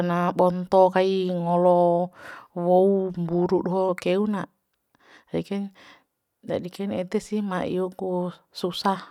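No technical faults can be heard anywhere in the speech, so there are none to describe in time order.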